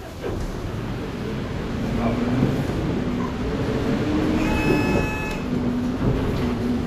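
Everyday sounds run with plainly audible codec damage from start to finish, most likely Vorbis compression at a low setting, which fits a bitrate around 35 kbps. Nothing is present above 14.2 kHz, and the upper treble has turned into grainy hiss, roughening tonal parts and smearing attacks. A plain low-pass filter would leave a clean, dull top. Here the remaining treble is noisy rather than simply missing, because coarse quantisation replaced that detail with noise.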